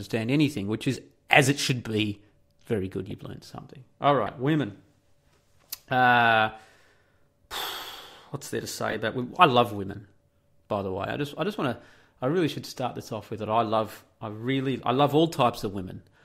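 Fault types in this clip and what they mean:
Corrupt frame decoded: Damaged bits inside a compressed frame were played rather than concealed, so wrong gains and misread codes put energy at frequencies the speech never had. The clip has three such faults. One sits at 3.10 s, just before "learned something", and is faint. A louder one comes at 4.26 s. The longest, about 70 ms, follows "what's there to" at 8.88 s and is the loudest.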